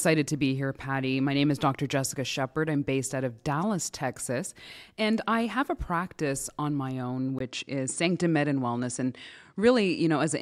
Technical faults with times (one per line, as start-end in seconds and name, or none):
7.38-10.41 input switched to a poorer device